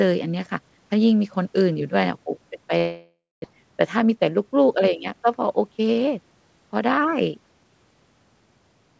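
A speech recording, band-limited at 8 kHz in a way that fits a G.722 call codec. From 2.78 s to 3.55 s there is a long network dropout, likely caused by packets failing to arrive. The last sound is stretched into a buzzy, fading tail, then about 230 ms of near silence, and about 600 ms of the sound never returns. Unlike a brief concealment glitch, the gap is long enough to empty out, and speech resumes slightly shifted in timing.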